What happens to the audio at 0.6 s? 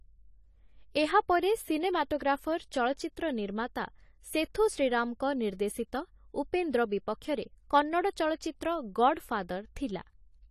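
At 0.6 s the speech carries the same damage heard across the whole clip: a dull, smeared tone with nothing above 14 kHz and a warbling, fizzy texture on sibilants and held sounds. This is likely AAC compression, with a frame-based coder discarding and coarsely quantising frequency detail it judges inaudible. The damage fits a low bitrate around 32 kbps. A plain low-pass filter would dull the sound without that swirling texture.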